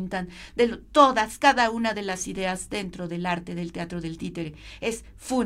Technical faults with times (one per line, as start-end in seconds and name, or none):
none